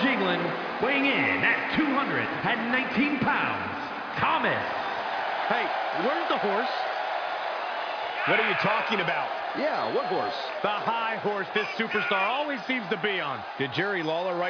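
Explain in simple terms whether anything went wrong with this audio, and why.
Nothing went wrong here.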